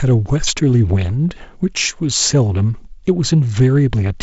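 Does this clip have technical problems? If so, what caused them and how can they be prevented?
No, this speech clip has no technical faults.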